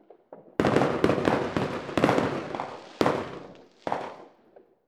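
Nothing here goes wrong technically; the sounds in the clip come through without a single glitch, dropout or distortion to point to.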